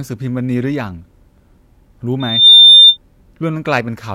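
From 2.20 to 2.97 s, loudspeaker feedback squeal: the microphone re-amplifies its own loudspeaker output. A 3.6 kHz tone swells over roughly a third of a second to about 15 dB above the speech. It shows as one bright horizontal spectrogram line.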